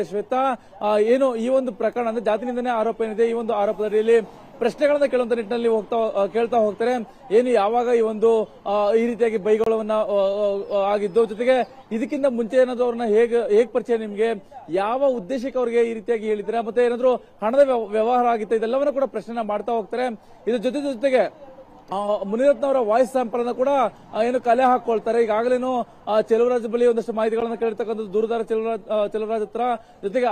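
Two brief dropouts to silence interrupt the audio, one from 9.64 to 9.66 s lasting 26 ms and a shorter 13 ms gap at 27.40 s, each a likely Bluetooth stall, where radio interference delayed packets long enough for the headphones' buffer to empty before retransmissions arrived. On a waveform each shows as a flat near-silent notch; on a spectrogram, as a thin vertical blank strip cutting across every frequency band.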